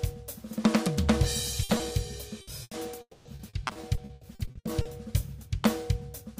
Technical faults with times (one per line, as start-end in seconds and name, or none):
1.63-1.71 burst of packet loss
1.77-1.81 short concealed packet loss
2.41-2.73 burst of packet loss
3.01-3.27 long network dropout
3.35-4.87 repeated packet loss (robotic sound)